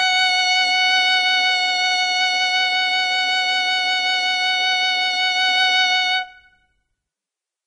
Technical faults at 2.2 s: Vorbis compression

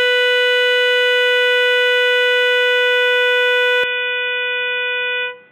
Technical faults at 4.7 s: input switched to a poorer device

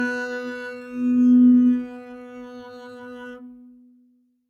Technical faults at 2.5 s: noise suppressor applied to music or sounds

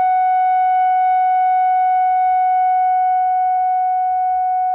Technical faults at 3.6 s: short concealed packet loss

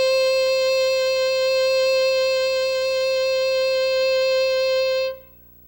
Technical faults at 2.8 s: video or display buzz

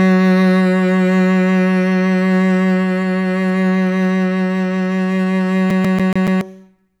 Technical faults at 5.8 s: CD stuck on one turn

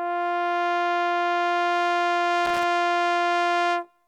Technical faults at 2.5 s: loose connector crackle

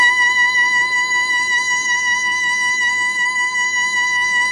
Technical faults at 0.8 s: HE-AAC compression

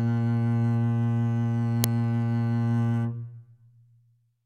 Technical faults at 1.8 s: uninitialised buffer

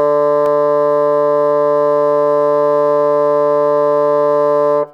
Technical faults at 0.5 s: block of digital silence

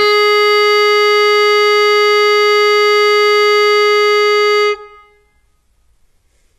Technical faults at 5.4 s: transcoding between lossy codecs

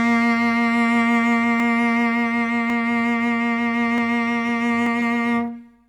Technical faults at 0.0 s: none

